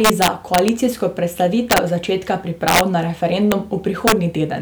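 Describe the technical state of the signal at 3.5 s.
At 3.52 s there's a single integer overflow crack: a speech peak about 1 dB over the limit wrapped to the opposite sign instead of clipping, giving one sharp snap.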